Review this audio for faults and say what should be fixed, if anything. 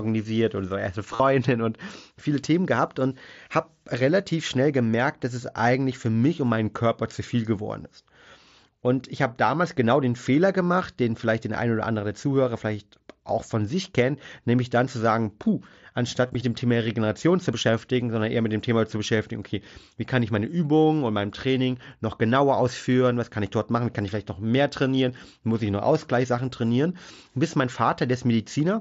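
Concealed Bluetooth headset packet loss at 1.14 to 1.20 s and 16.27 to 16.35 s: lost packets are filled by repeating recent waveform, giving a held buzzy tone (runs up to 45 ms) rather than the silent gap of a dropout. Reduce radio interference and headset-to-phone distance.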